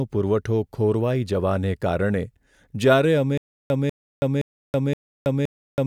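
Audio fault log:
3.38–5.87 s: stutter with silent gaps. A 194 ms fragment of speech repeats four times, each followed by about 326 ms of digital silence, giving a 520 ms cycle. It runs to the end. This likely comes from a stalled stream replaying its last buffer. The speech due in that span is lost.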